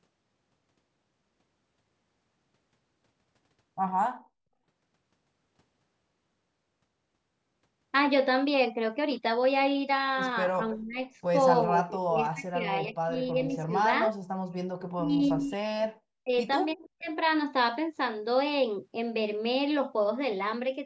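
From 10.74 s the speech is repeatedly pulled down in pieces, at 10.74–10.99 s, 11.64–12.69 s and 12.86–13.73 s, with dips of roughly 20 to 25 dB. This is speech suppressed in double talk, likely because the echo canceller could not separate the local talker from loudspeaker echo while both sides spoke. The voice itself sinks and breaks up, which is what sets it apart from background gating. Between 14.25 and 14.55 s the background is gated by the echo canceller: the room sound drops by about 40 dB while the loudspeaker plays, then snaps back when the canceller releases. Only the ambience vanishes here, not a talker. The double-talk suppression returns at 14.9–16.34 s, its deepest and longest stretch at roughly 40 dB, and again at 16.73–17.11 s, at roughly 30 dB.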